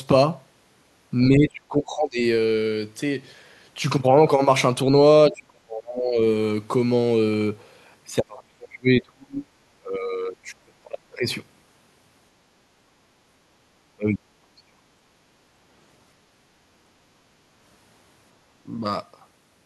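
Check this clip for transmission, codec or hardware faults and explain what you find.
The speech repeatedly sinks, five times: 1.29 to 2.23 s, 5.3 to 6.18 s, 8.21 to 9.5 s, 9.79 to 11.26 s, and 13.95 to 14.78 s. The level falls by about 25 to 35 dB at worst. This is likely speech suppressed in double talk, where an echo canceller, confused by both ends talking, attenuates the near talker too.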